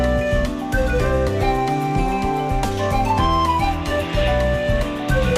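No technical faults can be heard anywhere in the audio.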